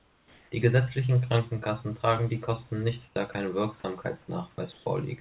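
At 0 to 0.52 s, 3.08 to 3.16 s and 4.72 to 4.86 s, comfort noise replaces the background. Only pauses change: the room noise turns steady and featureless, first about 2 dB quieter, later about 2 to 3 dB louder, likely through discontinuous transmission.

At 3.32 to 3.34 s and 4.02 to 4.04 s, sound is dropped by the voice detector. Here 20 ms of sound vanishes into that same steady noise, likely because the detector took the sound for background.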